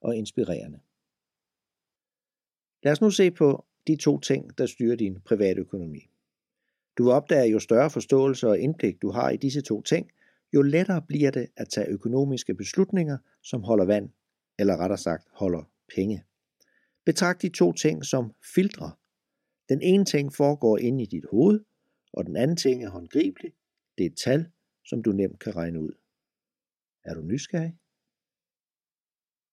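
From 22.64 to 23.85 s, just after "hoved og den anden", channel delay (comb filtering) sets in. One channel runs roughly 3 ms behind the other, and when the two are summed to mono, shared content cancels at evenly spaced frequencies. The first notch sits around 150 Hz, with further dips repeating up the spectrum. The speech turns hollow and phasey for that stretch. A spectrogram shows fixed, regularly spaced dark horizontal bands across the segment, while the waveform looks thinner where energy cancels.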